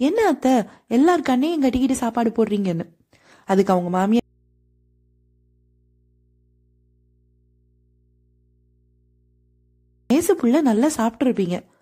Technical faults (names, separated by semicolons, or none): audio dropout to a faint residue